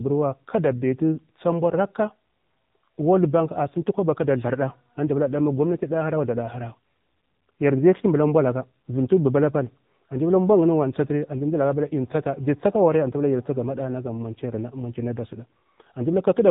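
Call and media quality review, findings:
Buzzy, synthetic speech, nothing above 3.8 kHz, whole clip. AMR narrowband mobile codec: sparse-pulse vocal-tract model at 8 kHz; damage fits a low 7.4 kbps mode.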